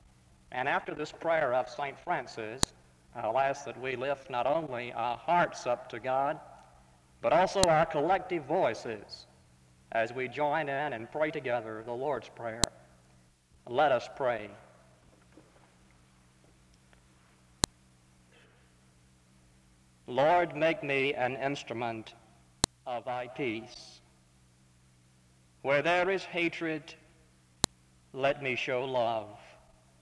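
Sharp clicks at 2.63, 7.63, 12.64, 17.64, 22.64 and 27.64 s, evenly every 5.0 s regardless of the signal, mark file headers played as audio at joined pieces rather than random dropouts.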